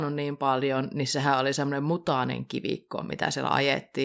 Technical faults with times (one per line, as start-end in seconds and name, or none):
none